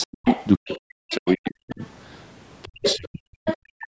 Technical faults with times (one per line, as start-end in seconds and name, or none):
0.00-0.78 other side's voice leaking through
0.04-1.80 speech suppressed in double talk
1.11-1.35 other side's voice leaking through
1.70-1.87 other side's voice leaking through
2.64-3.96 speech suppressed in double talk
2.84-2.96 other side's voice leaking through
3.47-3.87 other side's voice leaking through